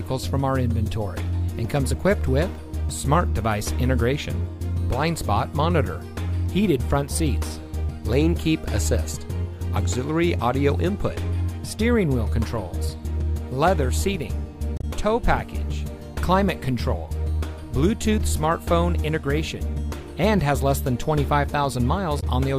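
At 14.77 to 14.84 s and again at 22.19 to 22.23 s, damaged data in a compressed stream makes the decoder misread frames and resync, giving a brief chirp, squawk, click or short hole.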